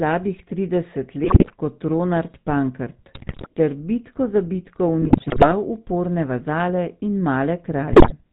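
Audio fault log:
throughout: GSM full-rate codec, a buzzy, gravelly sound with nothing above 4 kHz; the pulse-driven vocal-tract model that fits a 13 kbps stream roughens the voice noticeably.
1.24–1.53 s, 3.14–3.49 s (just before "ter bitko za bitko"), 5.02–5.54 s (just before "uporne vazale in"), 7.92–8.12 s: GSM bit errors, squawks, pops and gargling as corrupted filter, pitch and gain values distort frames.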